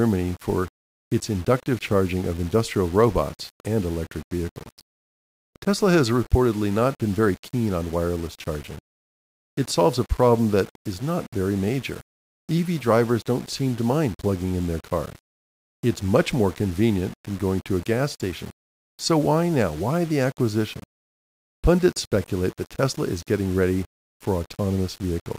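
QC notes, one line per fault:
Throughout, low bit depth without dither: the speech carries a grainy, rough distortion that tracks the signal, with error sitting roughly 25 dB below the level of the speech. Quiet passages and decays turn gritty, and the softest tails sputter between a couple of levels or drop straight to silence. The coarseness fits about 6 bits, likely from rounding to a short word length with no dither to break up the signal-correlated error.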